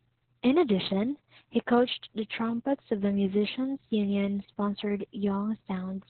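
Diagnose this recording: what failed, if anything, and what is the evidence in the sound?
The fault is at the codec stage: Opus voice compression, heavily applied throughout this speech. Nothing sounds above about 4.3 kHz, so the speech is muffled. It is also hoarse and slightly robotic. That fits narrowband SILK at around 6 kbps, coding the excitation very coarsely.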